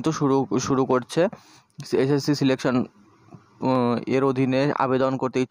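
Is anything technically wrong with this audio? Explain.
Yes. From 1.0 s to 5.13 s there are clock drift buffer slips: about four regular clicks, one every 1.38 s. This is likely two clocks disagreeing by around 150 ppm, so a handful of samples drops or repeats each time. A spectrogram shows thin vertical broadband lines at even spacing, and the waveform shows small discontinuities.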